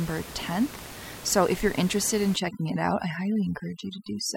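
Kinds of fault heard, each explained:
Overdone noise removal: from 2.36 s onward, excessive spectral suppression cuts bands near the noise estimate, reducing room noise to twinkling specks and taking quiet parts of the speech with it.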